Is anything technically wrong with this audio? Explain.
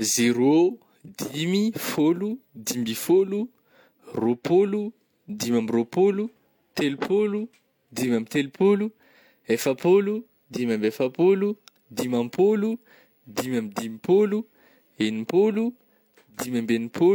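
No, nothing technically wrong can be heard in this speech recording. No fault shows up anywhere in the clip.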